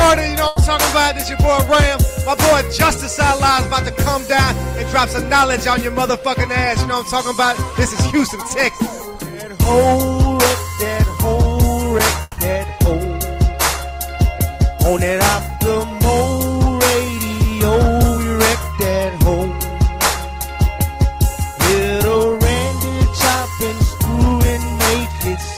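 A burst of packet loss hits the audio from 0.47 to 0.62 s. A short run of data never reached the player in time, so the receiver covered the hole by continuing the last sound for about 90 ms, fading it as a held buzz or hiss. When playback picks up again, about 80 ms of the original has been skipped, leaving a small jump forward in the sound. A long network dropout follows from 12.22 to 12.40 s. The sound is replaced for about 160 ms by a stretched, decaying continuation of what came just before, with no fully silent stretch. When the audio returns, a further 160 ms or so is simply gone. This is most likely a longer interruption in the incoming stream, which the receiver papered over by extending the last audio until the data resumed.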